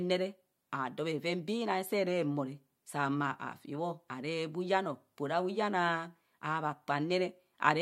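No technical faults are audible anywhere in the recording.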